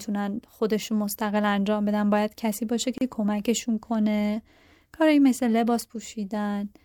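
At 2.98 s the speech drops out abruptly. The gap lasts until 3.01 s, a break of about 33 ms. This is a gap at a join of encoded pieces. The audio was encoded in separate sections and then joined without trimming. The encoder's start-up delay and the padding of the last frame both stayed in. The edges of the gap sound smeared by the codec. After the break, the speech resumes exactly where it stopped.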